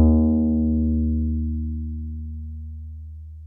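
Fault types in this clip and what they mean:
Time-stretched section: from 0.95 s to the end, the sound suddenly runs about 1.5 times faster while its pitch stays where it was. The pace jumps at that point and the rest comes across rushed. This is likely software squeezing that portion to a shorter length, keeping the pitch by cutting out short slices and splicing the remaining pieces together.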